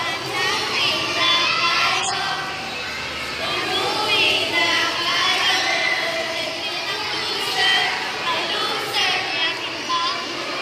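The audio has one fault: compressed frames skipped, between 1.93 and 2.14 s. Whole frames never reach the output, so the sound jumps forward by about 50 ms.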